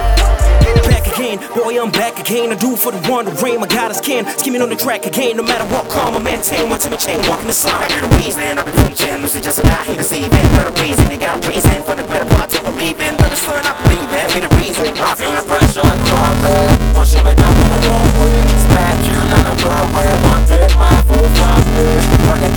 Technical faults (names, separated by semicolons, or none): buffer tearing